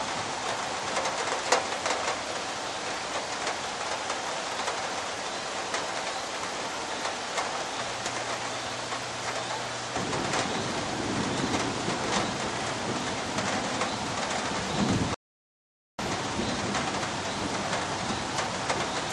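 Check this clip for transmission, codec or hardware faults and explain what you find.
One fault turns up, a rebuffering stall. At 15.14 s the player runs out of downloaded audio and waits for more data. The sound drops to silence until 15.99 s, then resumes exactly where it left off, adding about 0.85 s with nothing lost.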